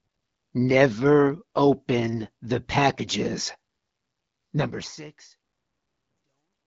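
No technical faults can be heard in this speech recording. The speech has the band-limited character of the AMR wideband (HD Voice) codec, and a smooth fade-out begins at about 4.5 s and reaches silence at 6.67 s.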